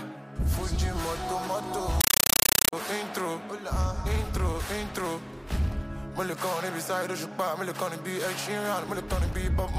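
From 2.01 to 2.73 s, a compressed stream is played as audio. The sound gives way to very loud, chattering static. Undecoded AC-3 data is being treated as samples: 8 ms noise bursts, then silence, repeating 31.25 times a second.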